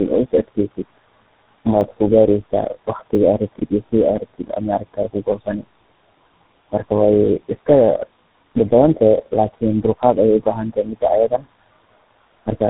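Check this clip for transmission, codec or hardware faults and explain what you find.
Two faults are present: tandem speech coding across the whole clip and two brief repeated buffers.

Tandem speech coding runs from start to end. The speech passed through several coders in turn, each re-coding the damaged output of the one before. The character points to three low-rate speech codecs in a row: G.723.1 at 6.3 kbit/s, GSM full rate at 13 kbit/s and G.726 at 32 kbit/s, joined by G.711 A-law links. Losses stack up. The speech sounds rough, muffled and warbly. Nothing remains above 3.9 kHz.

A repeated buffer occurs at 1.81 s and again at 3.15 s. Fresh audio came late, so the last block was played one extra time. Each repeat lasts about 10 ms, which fits a 10 ms buffer. The joins are hard, so each event is heard as a short click or buzz rather than a clear stutter. The repeat adds a copy instead of replacing audio, so little or nothing seems lost.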